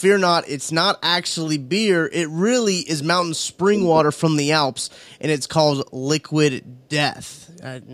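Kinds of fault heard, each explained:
Speech suppressed in double talk: from 2.45 to 3.82 s the speech dips and breaks up, about a second of it pulled down, at worst by roughly 30 dB, with a shorter, shallower dip of about 20 dB between 4.04 and 4.21 s. The likely cause is an echo canceller that heard both ends talking at once, could not tell this talker apart from its own loudspeaker echo, and attenuated everything it picked up.
Echo leak: between 4.91 and 5.1 s a faint delayed copy of the speech comes back, arriving 383 ms after the original and sitting very low, around 40 dB below the speech. It is likely residual echo: one end is on a loudspeaker, its microphone caught the playback, and the echo canceller there did not remove all of it before sending it back down the line.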